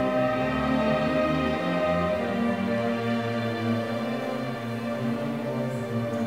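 The audio is grainy throughout, with a gritty distortion that rises and falls with the signal, roughly 35 dB below it. The likely cause is low bit depth without dither, consistent with 8-bit truncation. The waveform shows visible stair-steps, and the spectrogram shows noise tracking the signal.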